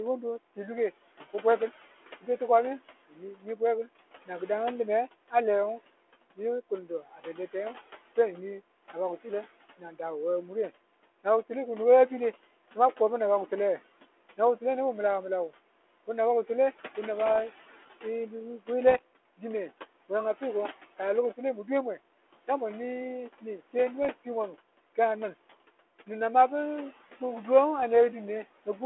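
A speech recording carried over a band-limited line of roughly 300 Hz to 3.4 kHz, which fits a 32 kbit/s G.726 ADPCM link, with several faults. Noise suppressor artifacts run throughout: the background is pushed down by about 17 dB between phrases and swells back under speech. Speech cut by the noise suppressor shows at 3.08 to 3.17 s, dropping by about 16 dB, and at 6.89 to 7.27 s, by about 11 dB. These are brief dips where the suppressor mistook quiet speech for noise, sounding swallowed rather than clicked or dropped out. Bit errors on an ADPCM link produce rough pops at 17.27 to 17.43 s, 18.87 to 18.99 s, 24.03 to 24.10 s and 27.79 to 27.84 s. Each burst rings on briefly with jumpy level because the decoder's step size and predictor are thrown off, unlike a clean single-sample click.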